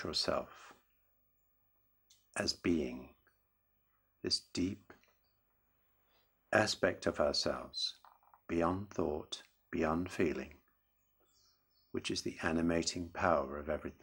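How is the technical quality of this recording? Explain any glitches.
No glitches or technical faults can be heard here.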